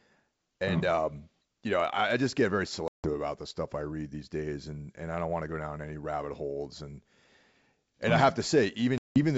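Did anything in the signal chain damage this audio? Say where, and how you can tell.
Yes, at the network stage: packet loss on an ADPCM call, twice. The first gap runs from 2.88 to 3.14 s, after "I just get very" and before "about the stuff I", and the second runs from 8.98 to 9.19 s. Each cuts out abruptly to silence, about 160 ms and then 180 ms of lost audio, several packets each. On the G.722 path the sound resumes unsettled, because the decoder's predictor and step size have drifted from the sender's. That recovery distinguishes it from a plain dropout.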